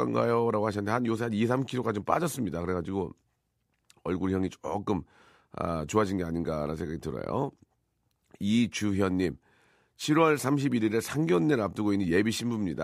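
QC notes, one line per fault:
Nothing stood out on listening to the speech in this clip.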